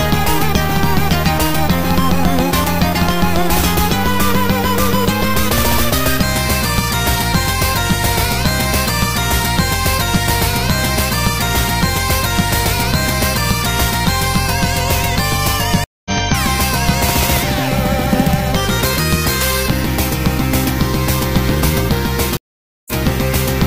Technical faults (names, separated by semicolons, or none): stream reconnect